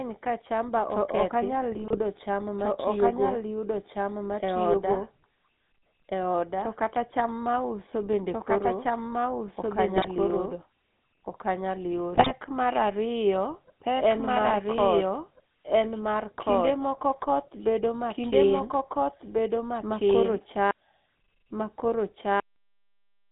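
Throughout, the speech is audibly doubled. A second, equally loud copy of the whole signal trails the original by about a second and a half. This is likely a doubled audio track from a second, slower capture path. It has no reverb tail, and on a spectrogram every pattern reappears intact, shifted right by roughly 1.5 s.

The entire clip also carries the GSM full-rate codec sound. The band is confined to about 150 Hz to 3.7 kHz, which fits a 13 kbps GSM line. Pulse-driven excitation modelling gives the voice a plainly audible buzzy, gravelly roughness. On a spectrogram everything above 3.7 kHz is empty, and the harmonics look coarse and smeared.

GSM bit errors strike at 1.72 to 1.99 s, just before "cham ma tiyo go", then at 9.96 to 10.07 s and 12.15 to 12.32 s. Corrupted filter, pitch and gain parameters make the voice squawk, pop and gargle. The waveform shows sudden level spikes, and the spectrogram shows short blocks of distorted, misplaced energy.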